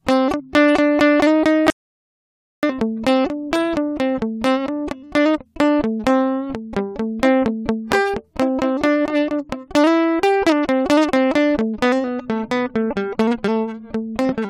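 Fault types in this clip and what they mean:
Audio dropout to silence: At 1.7 s the music stops dead mid-flow and is replaced by silence, with no room tone or tail left, until it resumes abruptly at 2.63 s; roughly 0.93 s of the performance is simply missing rather than muffled. The likely cause is that the input signal was briefly lost, through a disconnected device, a failed link or an accidental mute, while the recorder kept writing silence.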